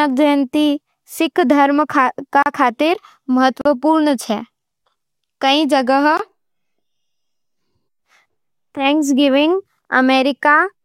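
Speech with three short holes, at 2.43–2.46, 3.61–3.65 and 6.17–6.19 s (about 34, 40 and 20 ms): blocks of digital silence, likely where output buffers went unfilled and were zeroed.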